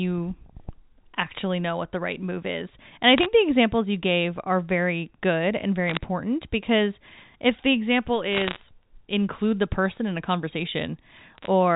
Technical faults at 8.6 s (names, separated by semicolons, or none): bit errors on a digital phone line